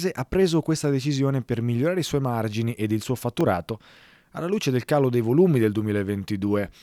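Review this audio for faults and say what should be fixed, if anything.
At 3.41 s, just after "margini ed il suo", a repeated buffer: one 1.33 ms block replays once, heard as a click rather than a dropout's silence, which fits a 64-sample buffer. A larger playback buffer or higher audio-thread priority would prevent this underrun.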